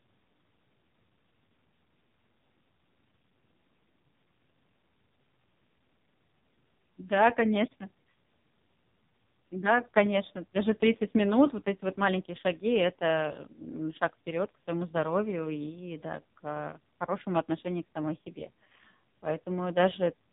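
From start to finish the speech carries the sound of the AMR narrowband mobile codec, the old 2G and 3G phone coder. Everything above 3.8 kHz is gone, so a spectrogram shows a flat ceiling with empty space above it. The damage is heavy: vowels sound buzzy and synthetic. This fits one of AMR-NB's lowest modes, around 5 kbps, where a handful of pulses per frame must rebuild the voice.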